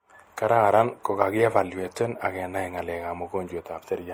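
Speech, with transcoding between lossy codecs throughout: layered, smeared compression artefacts that sound like an MP3-style encode re-encoded as Opus, likely from that chain. A spectrogram shows patchy, blocky upper bands and nothing above 20.2 kHz.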